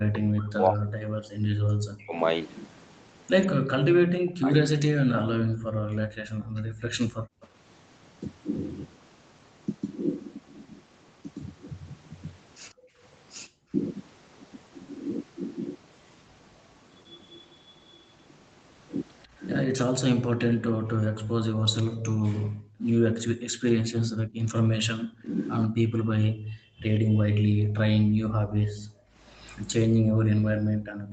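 From the start to 7.28 s the voice repeatedly dips, thins and breaks into pieces, by roughly 40 dB at its deepest and for about 4 s in all. This is speech suppressed in double talk: with both sides talking at once, the echo canceller likely could not tell this talker from the loudspeaker echo and turned everything down.

At 7.41 to 7.47 s a faint scrap of the voice returns 145 ms late, about 30 dB below the speech. This is echo leak, likely from a loudspeaker-side canceller letting some of its microphone pickup through. Another brief scrap follows at 12.70 to 12.74 s, about 35 dB down.

Right after that, from 12.74 to 13.72 s, the room sound drops out by about 40 dB for roughly half a second and then returns. This is background gated by the echo canceller, which clamped the microphone while the loudspeaker played.

From 17.06 to 22.08 s the 145 ms echo leak becomes a longer trail about 25 dB under the voice. 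Overlapping it, from 19.67 to 28.22 s, double-talk suppression likely returns, cutting into the speech for about 2 s in total. Between 20.60 and 24.01 s the background is gated again, vanishing for about 1.5 s in all.

From 25.63 s to the end the echo leak is at its strongest, about 10 dB below the speech. From 28.50 s to the end the background again drops by about 40 dB.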